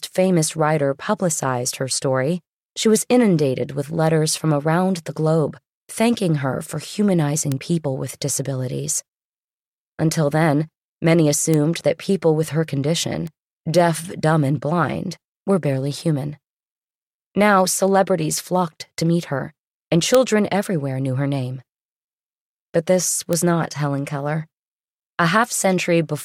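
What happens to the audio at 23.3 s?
A single flipped bit at 23.33 s throws one sample to about -1 dBFS before it returns, a bit error spike heard as one sharp broadband tick unrelated to the speech.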